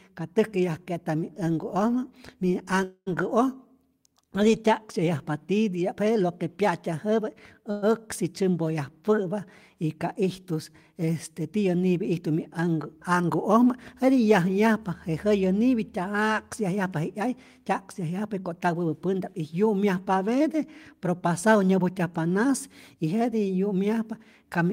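At 2.83 to 3.08 s and again at 7.71 to 7.84 s there is a call audio freeze. The last sound is stretched into a fading buzz, 230 ms long with its final 60 ms silent, then 112 ms. The likely cause is delayed packets emptying the jitter buffer. Unlike a dropout, nothing is lost; the speech resumes where it stopped, just later.

From 18.18 to 18.89 s and from 21.27 to 21.91 s, jitter buffer speed-up trims pitch-period slices, about a tenth of a second and then about 50 ms, so speech runs 111% and then 108% fast. Pitch stays unchanged, which separates this from a resampling error.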